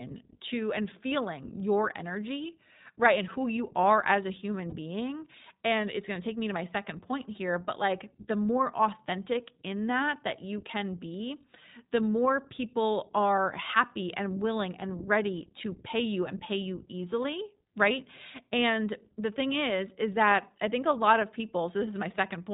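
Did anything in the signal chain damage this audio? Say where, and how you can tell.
Yes. The codec stage is at fault. The whole recording passes through the iLBC codec, a narrowband VoIP coder. A spectrogram shows a hard ceiling at 4 kHz with nothing above it. The plainly audible roughness and synthetic edge fit iLBC at 15.2 kbps with 20 ms frames.

There are two network-stage dropouts, heard as lost iLBC frames. The first runs from 4.70 to 4.74 s, just after "are as a human". The second is at 13.37 s, between "the more people" and "happy and willing and". Each fits one missing 20 ms frame. The decoder fills the gap by repeating the last pitch cycle with noise, so it sounds like a brief buzzy held vowel. On a spectrogram this shows as flat, unchanging harmonics, and the waveform shows near-repeated periods. Clean sound returns immediately after each gap.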